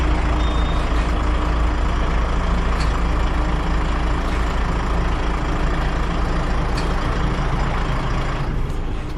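No technical faults can be heard anywhere in the audio, and the signal stays steady and intact throughout.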